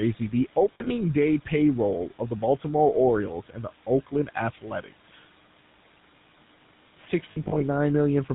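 Speech throughout carries the GSM full-rate codec sound: a buzzy, gravelly roughness with nothing above 4 kHz, consistent with the 13 kbps full-rate coder. That coder rebuilds the voice from a vocal-tract filter excited by a regular pulse train that keeps only every third excitation sample, which produces the grainy, band-limited tone here. Lost GSM frames appear twice. From 0.74 to 0.92 s, the sound freezes into a rough, metallic ring across a 160 ms stretch. This fits about 100 ms of missing audio, with the longest gap around 70 ms. The decoder repeats the last good frame's settings at falling level instead of passing clean audio. From 7.32 to 7.61 s, the same ringing returns, spread over 280 ms and amounting to about 140 ms lost, in shorter gaps of up to about 40 ms, so the hold-and-fade comes in several brief bursts. Between 2.07 and 2.43 s, speech is cut by the noise suppressor. About a tenth of a second of quieter speech sounds swallowed, dropping by up to about 10 dB because the suppressor judged it to be noise and lowered it with the background. 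Room noise sits about 23 dB below the speech and belongs to the recording itself.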